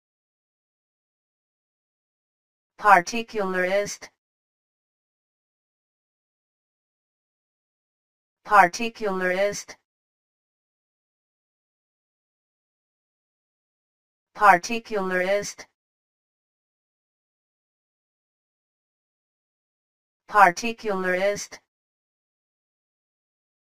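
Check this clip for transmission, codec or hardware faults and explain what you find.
One fault runs throughout: channel delay (comb filtering). One channel lags by about 10 ms; summed to mono, notches start near 40 Hz and repeat evenly, giving hollow, phasey sound. Unlike flanging, the notches never sweep.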